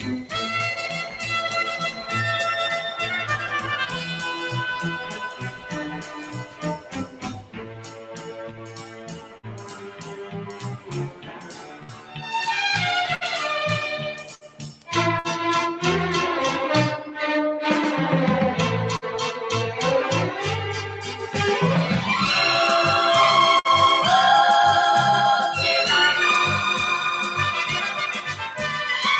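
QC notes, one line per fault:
Throughout: noise suppressor applied to music or sounds. A speech-oriented suppressor treats sustained and ambient content as noise, so level swings by around 10 dB. Onsets pass while held material and decays sink, giving a pumping, thinned texture.
1.04–1.24 s, 1.91–2.12 s, 5.04–7.24 s, 7.43–12.21 s, 14.19–14.88 s, 28.19–28.59 s: sound cut by the noise suppressor. Steady or fading passages were classed as noise and pulled down by about 5 to 9 dB, deepest in the longer stretches, so tails shorten and body drops out.
9.37 s, 11.83 s, 13.15 s, 14.35 s, 15.19 s, 18.96 s, 23.59 s: burst of packet loss. Each time about 60 ms of audio never arrived. The receiver extended the last sound for roughly 50 to 60 ms while fading it, heard as a brief smeared hold, then playback jumps ahead with that piece missing.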